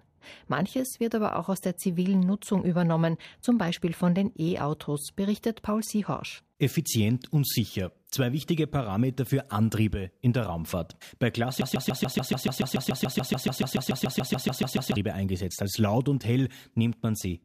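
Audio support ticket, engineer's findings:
Broken-record loop, 11.6–15.0 s: one 0.14 s speech fragment repeats 23 times back to back; spectrogram shows identical tiled blocks. Likely player or stream stall re-sending its last buffer.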